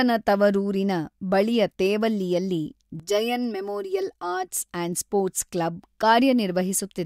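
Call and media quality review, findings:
Channel delay (comb filtering), 3.00–4.52 s, after "ತವರೂರಿನ ಬಳಿಯ ತೇವಲ್ಲಿಯಲ್ಲಿ". Speech turns hollow. One channel lags around 3 ms; mono sum notches near 200 Hz upward.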